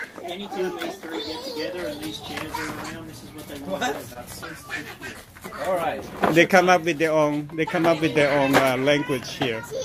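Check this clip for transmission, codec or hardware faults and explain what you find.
One transmission fault stands out. From 4.13 to 4.17 s there is a brief smeared wobble where the sound seems to stall and stretch. This is short concealed packet loss: about 20 ms of audio arrived too late, and the receiver filled roughly 15 ms by extending the preceding sound before blending back into the real signal.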